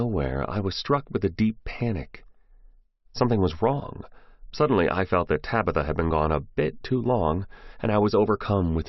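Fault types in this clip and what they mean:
No faults detected in this audio.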